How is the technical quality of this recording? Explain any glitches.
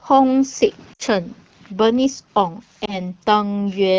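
Two short dropouts come from lost AMR speech frames. The call runs over the AMR wideband (HD Voice) codec, whose light coding roughness fits a rate around 12.65 kbit/s. From 0.93 to 1.02 s and again from 2.86 to 3.00 s, radio errors corrupted speech frames. The decoder then reused its last good pitch and vocal tract settings at falling gain. The first gap, about 60 ms or three frames' worth, drops to near silence within two frames. The second, a single 20 ms frame, is just a quick dip or warble.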